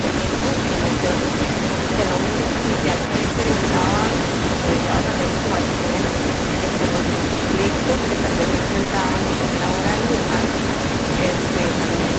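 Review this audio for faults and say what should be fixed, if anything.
Echo leak, 0 to 12.2 s: a second copy of the speech trails about 249 ms behind at roughly equal loudness, likely residual loudspeaker pickup that the far-end echo canceller failed to remove. Prevent it by having that side use a headset or by correcting the echo canceller's delay estimate and adaptation.

Short concealed packet loss at 0.39 to 0.43 s, 7.33 to 7.37 s, 7.37 to 7.41 s, 8.83 to 8.87 s, 8.87 to 8.91 s and 8.91 to 8.95 s: audio went missing in 20 ms units and the decoder filled each gap with extrapolated sound, heard as brief smears. The back-to-back losses near 7.4 s and 8.9 s stretch this into longer wobbles. Prevent it by enabling Opus in-band FEC and letting the jitter buffer adapt to the network's loss bursts.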